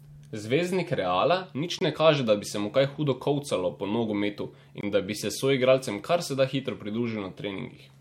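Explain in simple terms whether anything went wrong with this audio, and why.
Gap between chunks at 1.79 s, just before "ne kaže da bi", and at 4.81 s, after "hudo kolcalo po nogometu": the speech arrived in 3-second pieces, and about 21 ms of silence was left at each join, causing brief hard-edged dropouts.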